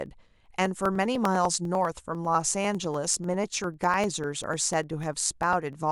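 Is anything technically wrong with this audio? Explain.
Yes. From 0.06 to 5.83 s there are periodic USB or driver dropouts: every 0.1 s a fraction of a millisecond of speech is skipped, giving evenly spaced ticks audible only under signal, unlike random clicks.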